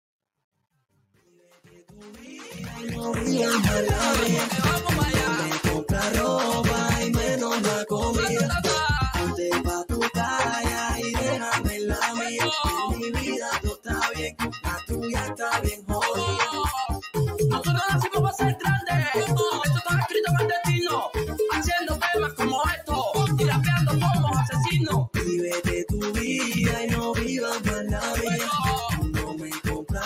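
Truncation distortion on a fade, 0.0 to 3.54 s: the fade-in is rendered with too few bits and no dither, consistent with roughly 11-bit precision, so its quiet start (worst 0.0 to 1.96 s) turns gritty.

A noise suppressor applied to music or sounds runs throughout: a speech-oriented suppressor treats sustained content as noise, so held tones and tails pump by around 5 dB.

Sound cut by the noise suppressor occurs at 13.67 to 13.9 s, 14.09 to 14.91 s, 15.25 to 15.42 s, 15.67 to 15.9 s and 29.24 to 29.91 s. Sustained or decaying sound drops by about 12 to 16 dB, and tails are clipped short.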